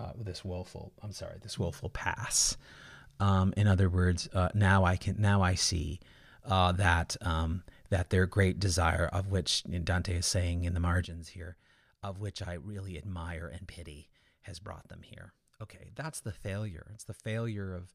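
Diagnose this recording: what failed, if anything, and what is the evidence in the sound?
A sudden gain jump occurs at 11.05 s: the speech and its background noise both drop by about 12 dB in a single step and stay at that lower level through the end of the clip. Because the noise floor falls by the same amount as the speech, the change sits in the signal chain rather than at the source. The likely cause is a digital gain setting applied instantly, without a ramp.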